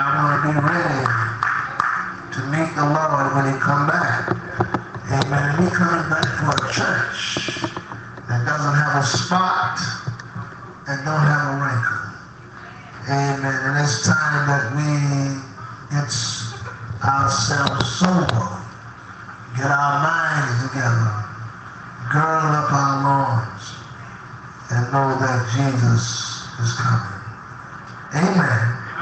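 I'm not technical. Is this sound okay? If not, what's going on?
Yes, nothing is wrong with this sound. It has the slightly dulled, phone-call quality of audio sent over an internet call, with the very highest tones trimmed away in a way that fits the call's usual 8 kHz limit.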